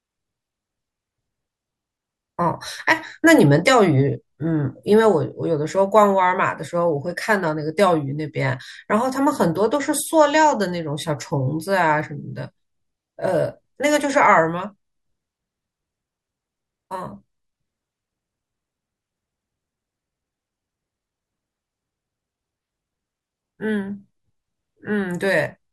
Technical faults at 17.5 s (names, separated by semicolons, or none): none